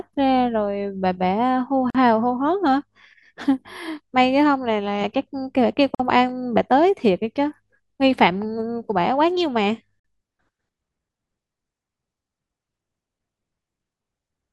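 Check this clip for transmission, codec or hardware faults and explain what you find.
One fault recurs: a gap at a join of encoded pieces, every 4 s, at 1.90 s (45 ms), 5.95 s (49 ms) and 10.00 s (49 ms). Separately encoded segments were joined untrimmed, so encoder delay and last-frame padding leave short silences with smeared edges, after which the speech resumes.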